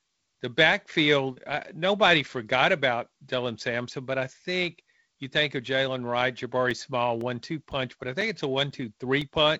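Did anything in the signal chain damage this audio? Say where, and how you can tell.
Yes: periodic USB or driver dropouts from 6.71 to 9.22 s. Ticks every 0.5 s, each a few-millisecond gap of silence, suggest something blocking the driver on a fixed timer.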